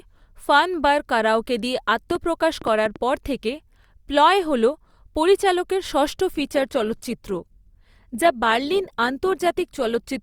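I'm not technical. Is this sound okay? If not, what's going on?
No. From 2.11 to 2.97 s there is a train of clicks, about seven uneven pops louder than the speech, likely from electrical interference or a faulty connection.

At 6.34 s the adaptive stream switches to a lower bitrate until the end. The sound suddenly turns rougher, with more compression artefacts, with no gap.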